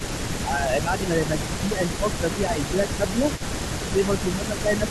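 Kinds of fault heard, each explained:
Echo leak: A faint copy of the speech trails it by 305 ms, about 20 dB down. This is likely an echo canceller passing loudspeaker pickup back.
Speech suppressed in double talk: The speech repeatedly dips by around 10 dB in stretches. This is likely the canceller turning down its own talker along with the loudspeaker echo during overlapping talk.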